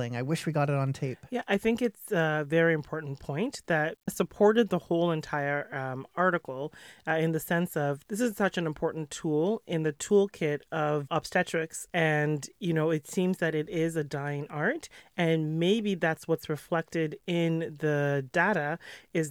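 From start to finish, the speech carries a grainy distortion that tracks the voice. It is low bit depth without dither. The likely cause is truncation to about 10 bits. The error sits roughly 45 dB below the speech, making quiet passages gritty.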